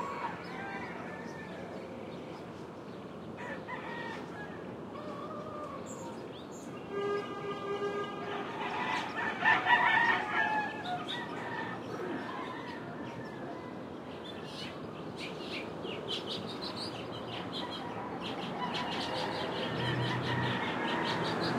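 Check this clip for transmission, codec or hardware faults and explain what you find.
One fault turns up near the end: a doubled audio track starting at 18.21 s and running to the end of the clip. From that point every sound is followed by a second, full-band copy of itself, a little quieter, roughly 5 dB down, trailing at a steady gap of around 150 ms. The copy switches on abruptly and carries no decay or room colour. The likely cause is the same signal being captured again over a slower path, or an edit leaving two copies out of step.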